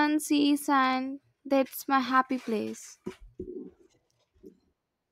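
Listening to the speech recording, no technical problem stood out at any point.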